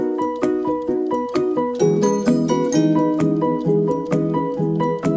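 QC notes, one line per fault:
No faults found; the audio carries the normal character of a wideband call path, with nothing above 8 kHz, consistent with G.722.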